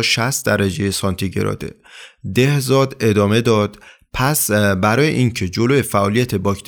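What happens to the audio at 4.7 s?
Nothing goes wrong at 4.7 s; the speech runs on intact through that moment, with no dropout, click or distortion to be heard.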